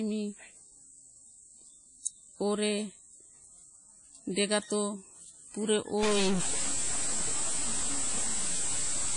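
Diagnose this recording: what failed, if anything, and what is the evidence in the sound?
The speech sounds washy and ringing throughout, with hiss that swells and fades with the voice and nothing above 10.1 kHz. This points to the codec stage, likely WMA compression at a low bitrate around 32 kbps, where coarse transform quantisation smears noise and drops weak detail.

From 6.03 s to the end, a distortion rides on the speech, and the gaps between phrases fill with noise. The likely cause is a stuck bit in the converter or its data lines, with one bit held fixed so that about half the samples are offset and small values near zero turn to noise.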